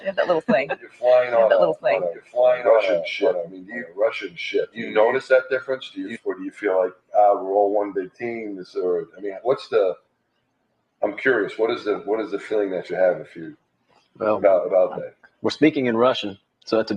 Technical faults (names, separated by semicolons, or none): noise suppressor applied to music or sounds; doubled audio track; sound cut by the noise suppressor